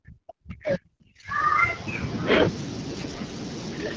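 From the start to 1.85 s, speech suppressed in double talk is the likely cause: with both ends talking at once, the echo canceller apparently could not tell the near talker from loudspeaker echo and attenuated everything. The speech sinks by as much as about 40 dB, thinning and breaking into fragments.

Inside that stretch, from 0.80 to 1.27 s, AMR bit errors appear. On a weak link, roughly one bit in ten of the less protected AMR-WB data arrived flipped, while the checksum on the critical bits still passed. The decoder placed excitation pulses wrongly and rebuilt the fine pitch, gain and spectral detail inaccurately. Pitch and loudness roughly hold, but the speech turns hoarse, scratchy and gargly. The same damage returns from 2.89 to 3.34 s, with a similar raspy, bubbling texture.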